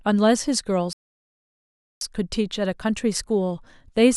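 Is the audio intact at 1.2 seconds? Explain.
No. A playback stall silences the speech from 0.93 to 2.01 s, about 1.08 s, likely because the player ran out of data, before resuming.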